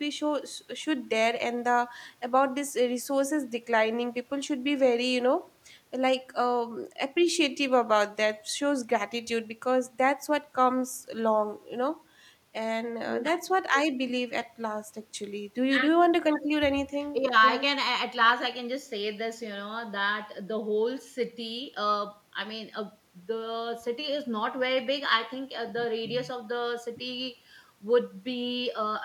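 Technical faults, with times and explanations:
Nothing stood out as a technical problem on listening to this speech recording.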